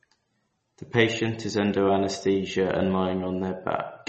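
A speech recording that carries MP3 compression damage from start to finish. Nothing is heard above 8.3 kHz, and what remains has a watery, swirling texture, with s sounds turning metallic and chirpy and consonant onsets smeared. This likely comes from an encoder starved of bits, consistent with a rate near 32 kbps. A plain low-pass filter would dull the top the same way but leave no swirl or chirping behind.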